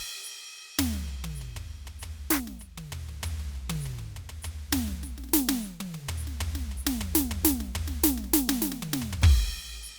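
No technical faults can be heard anywhere in this music recording; the signal holds steady throughout.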